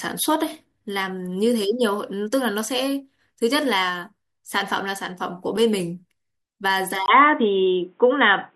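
At 7.06 s, after a 20 ms gap, the speech turns dull and boxy, likely because the input switched to a poorer device. A spectrogram shows everything above 3.8 kHz cut off. The waveform shifts level by about 5 dB over a new noise floor roughly 45 dB down.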